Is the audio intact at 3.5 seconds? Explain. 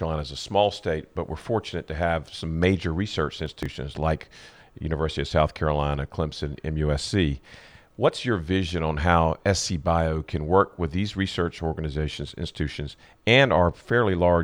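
No. From 3.46 to 3.66 s the speech breaks into a gritty burst of crackle. This is processor overload crackle: the processor couldn't finish its audio buffers in time, so roughly seven buffers of about 5 ms were skipped outright, leaving hard-edged gaps.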